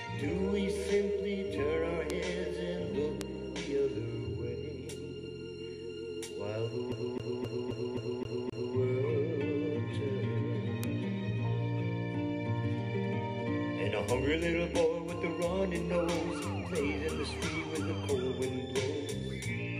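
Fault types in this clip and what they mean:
Bit error spike: A single flipped bit makes a sample jump and snap back. Four sharp broadband ticks land at 2.10, 3.21, 10.84 and 16.15 s.
CD stuck on one turn: A scratch throws the laser back each revolution. A 263 ms stretch repeats seven times from 6.92 to 8.76 s, giving a fast, even stutter.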